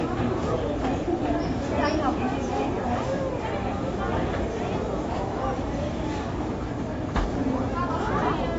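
From start to finish the sound is dull and smeared, with nothing at all above 7.6 kHz, and a warbling, fizzy texture clings to anything sustained. That's most likely AAC compression: the encoder quantises the spectrum hard against its hearing model and drops the top band entirely to save bits, which fits an AAC-LC stream squeezed down to around 24 kbps. The damage is plainly audible the whole way through.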